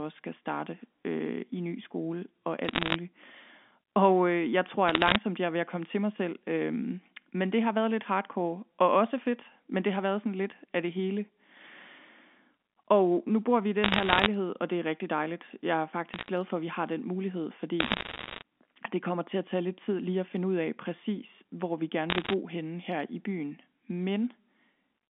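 Sharp ticks and crackle over the speech at 2.65–2.96, 4.88–5.16, 13.84–14.26, 16.14–16.30, 17.80–18.42 and 22.10–22.33 s are bit errors on a digital phone line, where flipped bits corrupt single samples.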